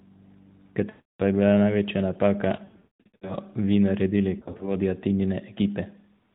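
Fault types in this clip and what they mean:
Lost AMR speech frames: radio errors corrupted frames, so the decoder stretched the last good sound with falling gain, giving drawn-out fades to silence and brief warbles.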